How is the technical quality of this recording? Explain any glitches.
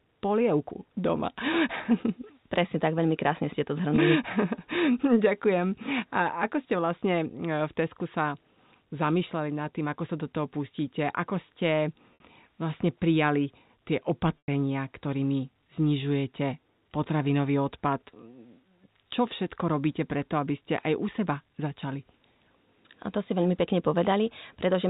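Four brief dropouts with pitch-repetition concealment mar the speech, heard over a telephone-band G.711 A-law channel with no audible energy above 4 kHz.

At 3.96–3.98 s, just after "veľmi krásne ste to", and at 7.00 s, after "ako ste", the sound briefly holds on a slightly buzzy, sustained tone lasting about 20 ms. This is packet loss with pitch repetition: each gap fits a single lost 20 ms packet, and the receiver filled it by looping the last pitch period.

At 12.14–12.20 s (60 ms) and 14.38–14.48 s (100 ms, after "prijali tie"), the held buzz is longer and fades toward silence before the speech cross-fades back in. Here the concealment had to stretch the repeated pitch period over several missing packets, so it faded the substitute out.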